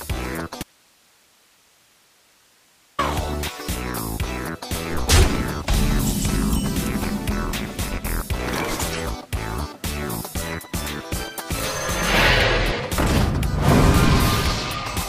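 The signal path likely lost its source for a stretch while everything downstream stayed live, giving an audio dropout to a faint residue from 0.63 s to 2.99 s. For about 2.36 s the sound cuts out abruptly, mid-flow rather than fading, and the gap holds only hiss sitting roughly 35 dB below the normal level. The signal then snaps back just as suddenly, so the break reads as a fault rather than a pause.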